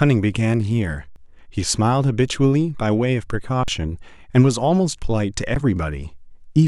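The speech stops dead three times, at 1.10 to 1.16 s, 3.63 to 3.68 s and 5.55 s. This is an underrun with held sample: the output buffer emptied, the converter held one flat value, and about as much live audio was lost.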